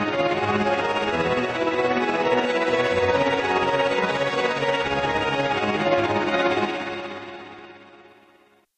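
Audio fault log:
No faults heard anywhere in this audio.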